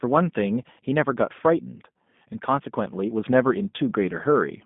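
A speech clip that sounds narrow, slightly rough and synthetic throughout, with nothing above 3.7 kHz and a band of roughly 150 Hz to 3.6 kHz. This is G.729 codec damage, plainly audible, which fits an 8 kbit/s low-rate speech coder.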